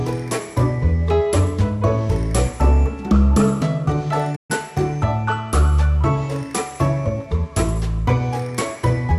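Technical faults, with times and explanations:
4.35 to 4.51 s, playback stall: the sound just cuts out mid-flow and the output goes silent for about 132 ms before picking up again. It's a clean hole rather than a click or a smear, so it doesn't sound like damage to the audio itself. The likely cause is the player running dry of data, or its thread getting blocked for a moment, so nothing reached the output until it recovered.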